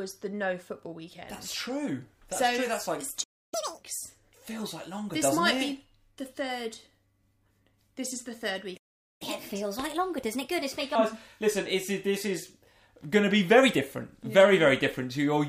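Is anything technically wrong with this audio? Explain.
Yes, there are two playback problems, each occurring twice.

Playback stalls at 3.23 to 3.54 s (about 0.29 s) and 8.77 to 9.22 s (about 0.43 s): the sound cuts to silence mid-flow, likely from buffer underrun or a blocked player thread.

Catch-up at higher speed follows each stall as the player resamples its backlog. From 3.54 to 3.83 s it runs at 2× speed, about ten semitones sharp. From 9.22 to 10.95 s it runs at 1.25×, roughly four semitones sharp.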